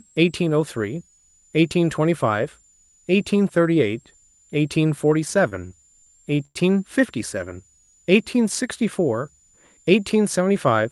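A switching supply whistle runs through the whole clip: a thin, high tone near 7 kHz that wanders between about 6.8 and 7.8 kHz as the supply's load shifts, sitting roughly 35 dB below the speech. On a spectrogram it appears as a faint, drifting horizontal line, inside the 12 kHz band the Opus call path passes.

From 5.49 to 6.57 s, repeated stalls (stutter) break up the speech. Packets arrived late five times, the jitter buffer ran dry, and the receiver stretched the last sound to fill about 195 ms, the longest wait 99 ms. Nothing is lost, but the speech drags and hiccups. The waveform shows repeated, smeared stretches.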